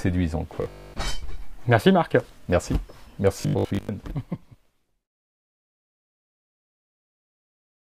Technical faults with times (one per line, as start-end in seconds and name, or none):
0.56-0.94 robotic sound from repeated short buffers
3.41-3.89 robotic sound from repeated short buffers